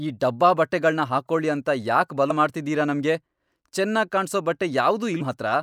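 A speech clip marred by two bursts of damaged data in the compressed stream, one from 2.27 to 2.31 s, just after "ಬಟ್ಟೆಗಳ್ನ ಹಾಕೊಳಿ ಅಂತ ಯಾಕ್" and before "ಮಾಡ್ತಿದೀರ ನಮ್ಗೆ", and a briefer one at 5.20 s. Corrupted bytes make the decoder misread those frames and lose sync until it finds the next frame header, so the sound there is disrupted. Unlike a plain dropout or an isolated click, these come from frames that were wrongly decoded or skipped.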